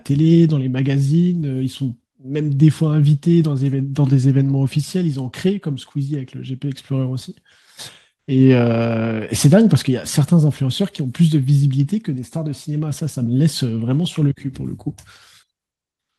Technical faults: none

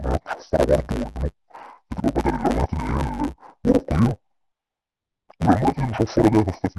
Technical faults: interleaved audio read as planar

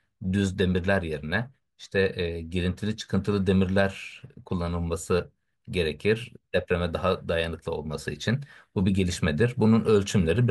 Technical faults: none

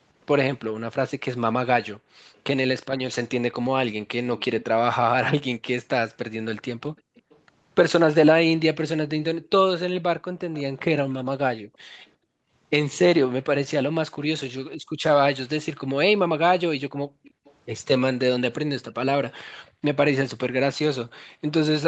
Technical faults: background gated by the echo canceller; echo leak

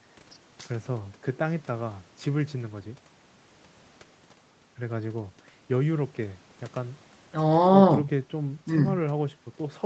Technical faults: none

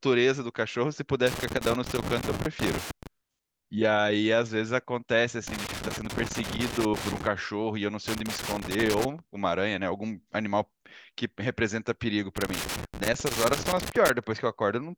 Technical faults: loose connector crackle

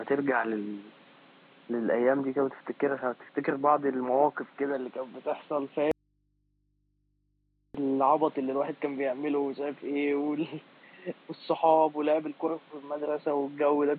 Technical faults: audio dropout to a faint residue

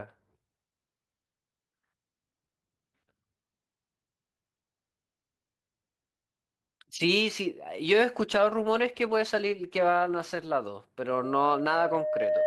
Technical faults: call bitrate drop; loudspeaker feedback squeal

